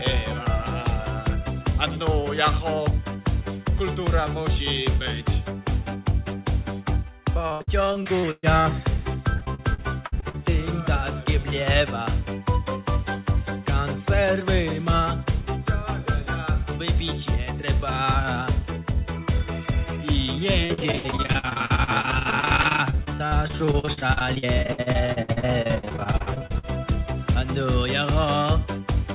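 From 7.48 to 8.67 s, 9.37 to 10.36 s, and again 20.66 to 26.65 s, there's repeated packet loss (robotic sound). Dropouts up to 120 ms get patched by stretching the previous sound, so about a third gets concealed, leaving choppy audio, dulled above 4 kHz, which fits a G.711 call.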